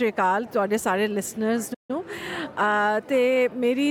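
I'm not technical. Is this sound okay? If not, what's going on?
No. At 1.74 s the sound suddenly cuts out and stays silent for about 150 ms, until 1.91 s. This is a playback stall, most likely because the player briefly ran out of audio data or got held up and fell silent until it caught up.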